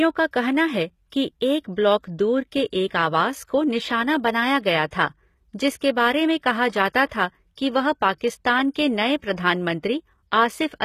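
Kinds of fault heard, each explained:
HE-AAC compression: The top end of the speech sounds bright but synthetic throughout, with s sounds coming out gritty and lispy and the treble not quite lining up with the lower harmonics. That's the signature of spectral band replication, where only the lower spectrum is really coded and the highs are copied up from below and shaped roughly. The damage is plainly audible, likely from HE-AAC squeezed down to around 20 kbps.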